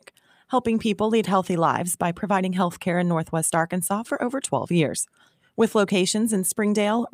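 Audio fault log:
0.01–0.5 s: sound cut by the noise suppressor. The suppressor misjudged this opening sound as background noise and pulled it down by as much as about 10 dB, with roughly a third of a second of the span affected. Sustained and decaying parts lose the most, sinking in level or having their tails clipped short, while abrupt onsets pass largely intact because the gain reduction acts on steady energy.
5.08–5.49 s: sound cut by the noise suppressor. The same misclassification recurs here, with a deeper cut of about 12 dB across roughly 300 ms of the span. The effect is again uneven. Held and fading portions dip or end prematurely as the suppressor clamps them, whereas sharp transients come through close to their original level.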